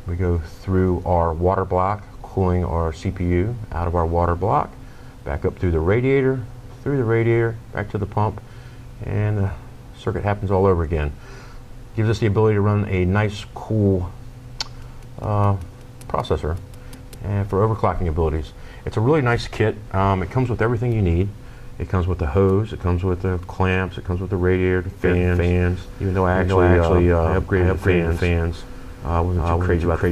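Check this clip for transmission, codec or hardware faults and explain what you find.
One fault is present: a doubled audio track from 25.04 s to the end of the clip. At that point a second copy of the sound cuts in abruptly. It trails the original by roughly a third of a second and is at about the same level. The copy is full-band and dry, with no decay or room colour. This is likely a second capture through a slower path, or two misaligned copies left in an edit. The result is a hard, flat echo of everything.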